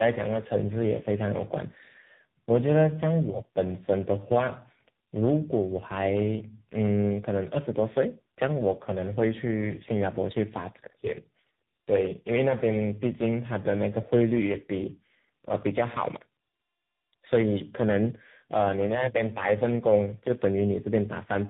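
Speech, and the whole thing has that chewed-over sound of tandem speech coding. It's rough, muffled and a bit warbly all the way through, with nothing above 3.8 kHz. It sounds like the call hopped across several links, getting decoded and re-encoded at each border so that three speech coders in a row each worked on the previous one's damage, most likely ending on a low-rate AMR narrowband leg.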